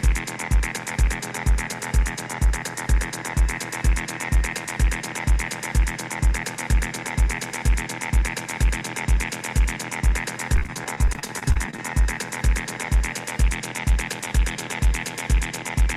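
From 10.56 to 11.79 s there is repeated packet loss, heard as robotic sound. Many short gaps follow one another, the longest about 33 ms. Each is patched by repeating the last sound, so about a quarter of the stretch turns choppy.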